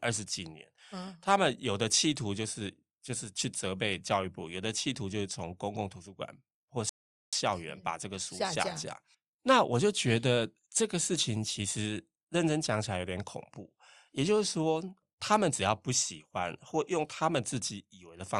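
At 6.89 s the speech drops into silence, holds there until 7.33 s, and then carries on from exactly the point where it broke off, with nothing skipped or repeated. That is a rebuffering stall: playback outran the downloaded audio, so the player paused and waited for more data to arrive before continuing. No material is lost, but the gap adds 433 ms to the running time.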